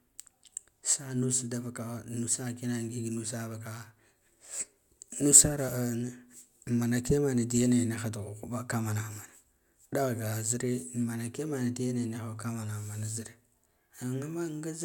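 Nothing is technically wrong with this speech recording.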